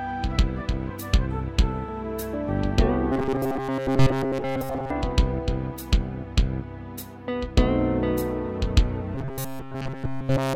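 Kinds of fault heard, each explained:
Robotic sound from repeated short buffers: a rigid 134 Hz metallic buzz, likely a 7.5 ms stretch being replayed; spectrogram shows fixed, evenly spaced harmonics, waveform shows identical repeating cycles.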